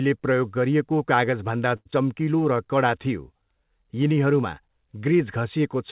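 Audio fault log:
1.76–1.87 s: short stall from a late packet. The sound at 1.76 s is held for about 94 ms, the receiver extending the last sound while its jitter buffer sat empty waiting for the overdue packet. Playback then resumes exactly where it stopped, so nothing is lost; the whole timeline just shifts 94 ms later. Unlike a skip ahead, the fault here is an extension of existing sound, not a gap in the material.
1.91–1.94 s: skip ahead. Only about 40 ms after the stall, roughly 70 ms of audio goes missing, joined across with an 8 ms patch. The audio was dropped either on the way or by the buffer when it overflowed, pulling the delay back by around 50 ms. The join is abrupt: the sound jumps forward mid-flow instead of pausing. The difference from a stall is that material disappears, rather than being held and then continued.
2.25–2.64 s: jitter buffer slow-down. Over this roughly 0.4 s stretch, playback drops to about 88% speed while the pitch stays unchanged, adding 56 ms in total. 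The buffer was running low or had just raised its target delay, and rebuilt its reserve by repeating single pitch periods and small sections of pauses many times in sequence, producing drawn-out sounds. Compared with a late-packet stall, the added time is spread across the passage instead of being concentrated in one held sound, and it occurs within an audio band that stops at 4 kHz, which fits a G.711 call path.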